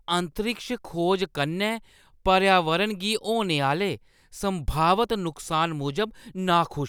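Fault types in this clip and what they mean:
No technical fault can be heard in this speech recording. There is nothing to list for it here.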